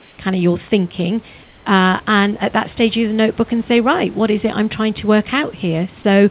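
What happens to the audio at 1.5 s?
From 1.44 to 1.66 s the room background gives way to a flat, featureless hiss about 3 dB quieter. That's likely comfort noise in place of the background: the sender went silent during the pause, and the receiver filled those 220 ms with synthetic noise.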